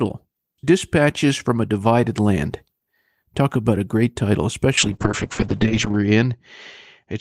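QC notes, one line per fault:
4.78–7.20 s, call bitrate drop: right after "about a great title" the sound turns rough and watery and loses its top end. The encoder's budget falls from 32 kbps to about 7 kbps and stays at its lowest for about 1.19 s. At such a low rate each frame is coded far more coarsely, and the audio band shrinks from 20 kHz to 8 kHz, which muffles it. It does not recover before the clip ends.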